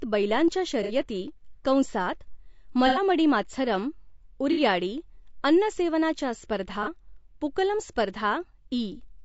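From start to finish the speech has a rough, grainy texture, most likely from low-delay AAC compression (AAC-ELD) at 32 kbps. The very short frames resolve the pitch harmonics poorly, so the damage is plainly audible: noise fills the gaps between harmonics and the top band sounds synthetic. On a spectrogram the harmonic stripes look blurred, with a haze between them and a patchy, smeared upper region.

AAC frame loss with concealment breaks in four times: 0.83 to 0.92 s, 2.87 to 3.01 s, 4.52 to 4.61 s, and 6.83 to 6.88 s. Each time the decoder rebuilt the missing audio from the last good spectrum. About 60, 90, 60 and 30 ms went missing, which fits two, three, two and one lost frames. Each gap sounds like a brief smeared, noisy, phasey patch. The spectrogram shows short columns where the harmonics dissolve into diffuse noise, and the waveform loses its clear periodic shape for those stretches.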